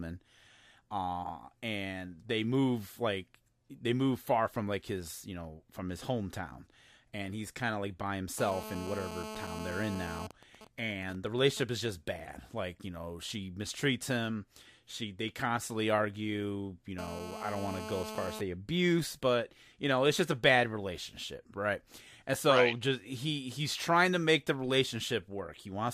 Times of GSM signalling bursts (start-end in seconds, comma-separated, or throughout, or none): 10.31-11.63